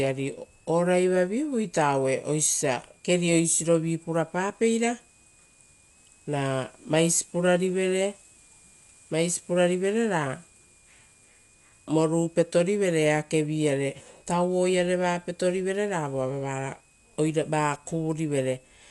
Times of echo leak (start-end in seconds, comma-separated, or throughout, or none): none